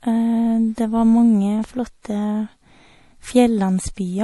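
A short speech recording carries plainly audible damage from what is likely MP3 compression throughout. Nothing reaches above 11.5 kHz, so the treble stops at a hard shelf, and the sibilants come out watery and swirling, with chirpy metallic edges, as the encoder drops weak frequency lines on and off between frames. That degree of damage fits a low bitrate around 48 kbps. A spectrogram shows a flat ceiling at 11.5 kHz and speckled, blotchy gaps in the upper bands.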